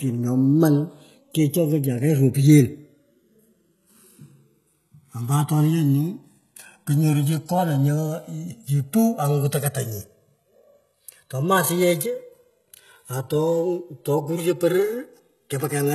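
Speech, with three technical faults. The two channels are on clocks that disagree by around 150 ppm, so the gap between left and right creeps steadily and reaches a few milliseconds by the end. That's channels drifting apart. Fold it to mono and the comb notches slide slowly through the spectrum, so you hear a slow flanging swish. The top end stops dead at 12.3 kHz, and the whole thing has that smeared, watery low-bitrate texture even though it's sitting in an MP3 that points to a high rate like 256 kbit/s. It's likely low-bitrate audio saved at a high bitrate, with something like a 16 kbit/s HE-AAC encode underneath. The re-encode adds bytes but can't bring back what the first codec threw away, so the cut-off and artefacts carry straight through. Then there are two spots where everything sags: from 5.7 to 7.58 s and again from 9.75 to 10.35 s, speed drops 5.42% and pitch falls 96.5 cents, just under a semitone, then snaps back to normal. 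That's most likely a drift correction step, where clock-matching software yanked the playback rate in one jump to rebalance its buffer, so speed and pitch move together and then recover abruptly.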